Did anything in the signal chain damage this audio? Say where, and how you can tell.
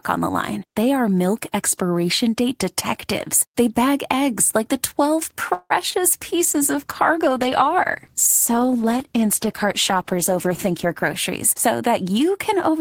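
Yes. The damage is in the network and jitter-buffer stages of a call, with the codec's bitrate also reduced.

At 5.53 to 5.72 s there is a call audio freeze: the sound stretches into a fading buzz for about 167 ms, ending in roughly 40 ms of silence. It then resumes where it stopped, with nothing lost. That points to packets likely delayed in transit while the jitter buffer ran dry, adding 167 ms of delay.

At 5.90 to 6.01 s there is short concealed packet loss, heard as a brief smear. About 20 ms of audio never reached the decoder, and the receiver filled the hole by extending the preceding sound for about 22 ms, adding a few milliseconds, before blending back in.

A call bitrate drop runs from 6.39 to 11.23 s. The encoder's rate falls from 32 to 13 kbps and stays at the low rate for about 4.8 s. The sound turns coarse and watery, with the top end dulled, because far fewer bits describe each frame.

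There is jitter buffer speed-up at 10.64 to 11.04 s at 107% speed, removing about 40 ms, and at 11.67 to 12.78 s at 106%, removing about 70 ms. The audio hurries at unchanged pitch as whole pitch periods are cut to drain a backlog of buffered audio.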